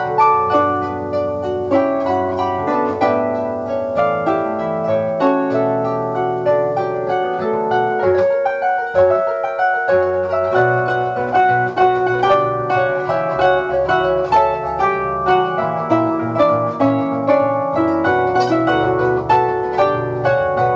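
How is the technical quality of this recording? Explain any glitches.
No technical faults can be heard anywhere in the recording. There are no glitches to explain.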